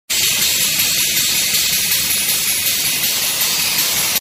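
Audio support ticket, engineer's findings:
No faults found on listening. Nothing in the audio points to a failing component or path.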